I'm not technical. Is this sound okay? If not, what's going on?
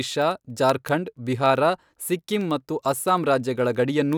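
No. Two pieces of equipment passing the audio digitally are each running on their own clock instead of sharing one, and their timing drifts apart by a small but steady amount. Every time the drift adds up, a single sample is lost or repeated. These are word clock ticks: sharp clicks roughly every tenth of a second, about forty in all, from 0.12 s to 4.13 s, running under the speech the whole way through.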